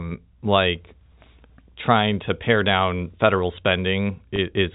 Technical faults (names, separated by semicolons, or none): packet loss with pitch repetition